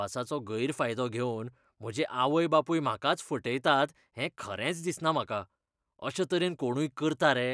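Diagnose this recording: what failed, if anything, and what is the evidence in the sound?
Nothing in the signal chain can be heard to fail: the speech runs without dropouts, clicks, distortion, level jumps or timing disturbances anywhere in the recording.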